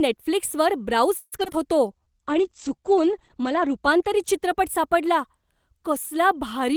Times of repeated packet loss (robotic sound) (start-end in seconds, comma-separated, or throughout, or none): 1.17-1.55